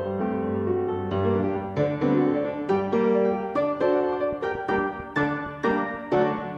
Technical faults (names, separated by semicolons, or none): train of clicks